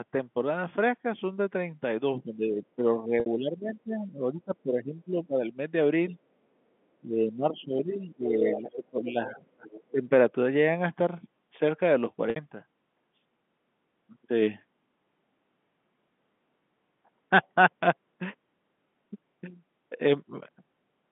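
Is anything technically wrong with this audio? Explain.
Yes. Three kinds of fault stand out on this narrowband telephone line.

Speech suppressed in double talk occurs at 2.24–5.4 s, 6.1–6.17 s, 7.02–9.67 s and 9.92–10.07 s. The likely cause is the echo canceller failing to tell the talker apart from loudspeaker echo while both sides spoke, so it turned everything down. The voice sinks by about 15 dB in the first stretch, only about 5 dB in the brief second one, about 20 dB in the third and about 15 dB in the last, sounding dipped and choppy.

Packet loss with pitch repetition hits at 3.2 s and 12.3 s. Each gap lasts 60 ms, which fits three 20 ms packets. The receiver filled each gap by repeating the last pitch cycle and fading it out. The result is a brief held, buzzy tone in place of fresh speech, followed by a quick cross-fade back into the talker. The first gap falls inside the suppressed stretch, so it sits under the already lowered level.

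The other side's voice leaking through appears in four scraps: 8.52–8.75 s, 9.02–9.1 s, 9.26–9.43 s and 9.68–9.91 s. This is likely residual echo that the canceller did not remove from the talker's microphone. The first scrap sits about 10 dB under the main speech, the second about 15 dB, and the last two about 20 dB. They come through as fragments of a second voice clustered at the end of the deepest suppression.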